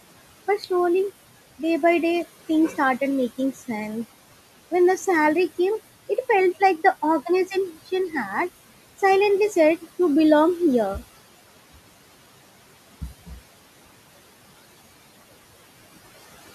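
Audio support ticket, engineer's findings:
Noise suppressor artifacts throughout: background drops about 17 dB between phrases, swells back under speech. Per-frame band gating by the suppressor. Room noise sits about 17 dB under speech, nothing wrong there.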